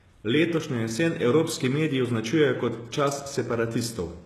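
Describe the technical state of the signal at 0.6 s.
At 0.6 s the speech carries heavy HE-AAC compression damage, present from start to end of the clip. The sound is likely explained by spectral band replication. Only the lower spectrum is really coded, and the treble is synthesised by copying lower bands upward under a coarse envelope, which fits a very low rate near 16 kbps. Sibilants come out gritty and lispy, and nothing sits above 12.3 kHz. Unlike a plain low-pass or MP3 loss, the top end stays bright but its harmonics fail to line up with those below.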